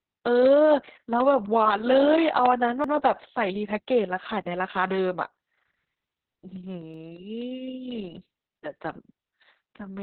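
Opus voice compression runs through the whole speech clip. Nothing remains above about 4.4 kHz, and heavy coarse coding of the excitation leaves the voice muffled, hoarse and slightly robotic. That points to the SILK coder in narrowband mode at a very low bitrate, around 6 kbps.

From 0.21 s to the end, periodic USB or driver dropouts recur every 0.25 s. At each one a brief slice of audio is lost and replaced by silence, so regular ticks sit on the signal, consistent with a background task stalling the audio path on a fixed schedule.

Overlapping chunks appear at 2.84 s and again at 6.94 s, 4 s apart. At each join the new chunk starts 100 ms before the previous one finished, so that 100 ms plays twice and the speech stutters briefly.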